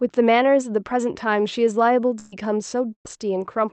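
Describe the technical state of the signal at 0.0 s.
At 0.0 s the speech signal is intact, with no fault present; it has simply passed through the call path, where the Opus codec limits the audio band to about 8 kHz.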